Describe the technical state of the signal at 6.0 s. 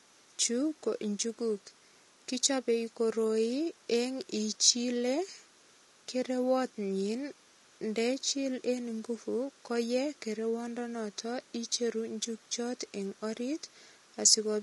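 At 6.0 s, as throughout the recording, the speech shows low-delay AAC compression, likely an AAC-ELD stream near 32 kbps, whose short frames resolve pitch harmonics poorly, so the voice sounds rough and grainy, with noise filling between harmonics and a lowered or synthetic-sounding top band.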